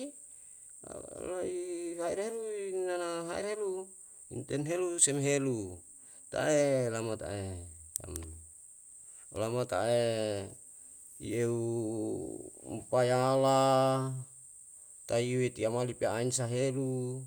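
Nothing in this speech recording stood out as a technical fault on listening.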